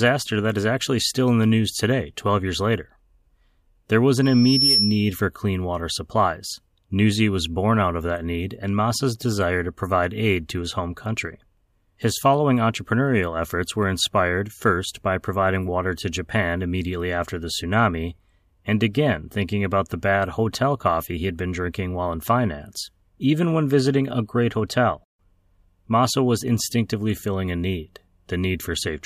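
From 4.22 to 5.13 s a piercing 5.4 kHz tone swells over roughly half a second until it sits a few decibels above the speech, then stops just before "for clean water supplies". This is loudspeaker feedback squeal: the microphone picked up its own loudspeaker, and the loop gain exceeded one at that frequency.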